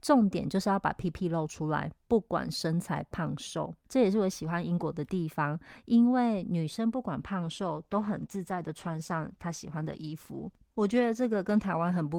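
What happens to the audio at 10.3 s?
At 10.3 s the speech is inside a call bitrate drop running from 7.4 s to the end, with the encoder pushed from 64 to 15 kbps. Coarser coding makes the voice rough and muffled, and on a spectrogram the upper frequencies vanish.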